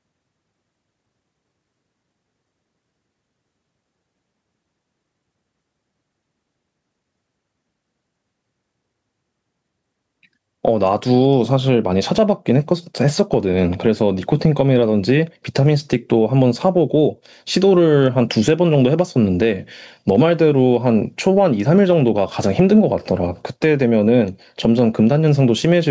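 Gain pumping runs through the whole of this speech recording, with the level swinging by around 10 dB. The likely cause is input gain set far too high for the microphone, so a fast limiter or compressor keeps clamping down on the peaks and releasing in the gaps, squashing the dynamics. The call microphone processing leaves nothing above 8 kHz.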